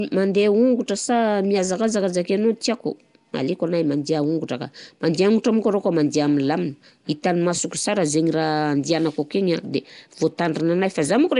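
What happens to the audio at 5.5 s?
At 5.5 s the speech carries the same damage heard across the whole clip: plainly audible codec artefacts, with nothing above about 10.6 kHz. The likely cause is Nellymoser compression, the old Flash microphone codec, which codes 256-sample blocks at a fixed two bits per sample. Weak bands receive no bits and are filled with noise, giving a rough, hissy halo and a smeared, underwater quality, consistent with a stream around 44 kbps.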